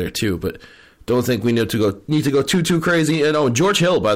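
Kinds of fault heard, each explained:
Hard clipping: The speech is driven about 5 dB past what a stage in the chain can pass, so every peak is sheared off flat. Only a small share of samples, around 4 percent, hit the limit, which gives crackle and grit on the loudest syllables throughout. On the waveform the peaks show as flat plateaus. On a spectrogram each clipped moment sprays harmonics up into the high kHz range as brief vertical smears.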